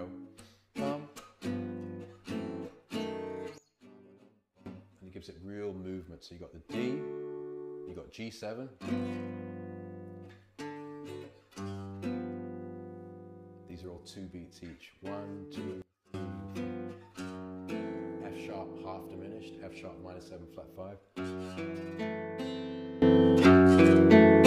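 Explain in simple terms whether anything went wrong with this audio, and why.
Sudden gain jumps: the sound drops abruptly at 3.58–4.66 s and 15.82–16.14 s, then jumps up from 23.02 s to the end. The background moves with it, with no fade, likely from an unramped digital level change.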